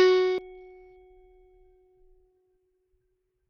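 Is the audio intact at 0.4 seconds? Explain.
No. A CD skip at 0.38 s: a knock or a flaw sent the laser to another track turn, so a brief mute of a few milliseconds ticks and the music jumps. Throughout, dull, flickering treble and gritty grain point to heavy Bluetooth SBC compression, likely at a low bitrate.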